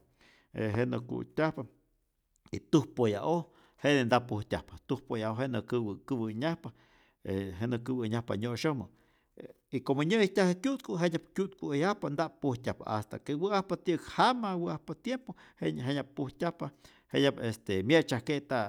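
A speech clip with a single loud pop at 0.75 s, a sharp transient standing roughly 10 dB above the speech, which carries on unbroken underneath. That continuity separates it from a dropout. The likely cause is a voltage spike from a plug, switch or static discharge.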